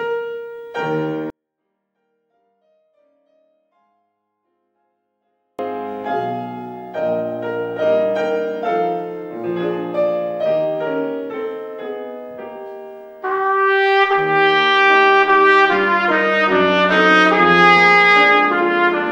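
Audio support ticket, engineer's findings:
24-bit alignment error (too quiet), 1.30 to 5.59 s. Level falls about 48 dB, nearly inaudible but clean, no distortion. Probable culprit: sample packing. 24-bit values sitting in the low bytes of a 32-bit word, read as full 32-bit integers.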